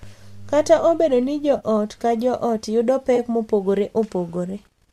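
AAC frame loss with concealment hits this speech clip twice. The first is at 1.57 to 1.64 s, between "obedo ni" and "ka joot yudo". The second is at 3.16 to 3.19 s, just after "ka joot yudo". The decoder lost about 40 ms and then 20 ms of frames, which fits four and two short low-delay frames, likely AAC-ELD at 64 kbps. It patched each gap from the last good spectrum, leaving a brief smeared, phasey blur where the sound should continue cleanly.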